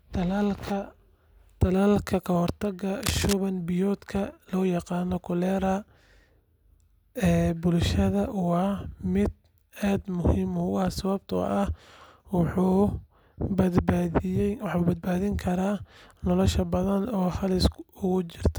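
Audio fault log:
3.03–3.33 s, cable scratch noise: a dense, uneven burst of scratchy rustle sits over the speech, only slightly quieter than it, most likely from a worn cable or connector being moved. Unlike steady crackle or isolated clicks, it comes as one clustered, irregular patch.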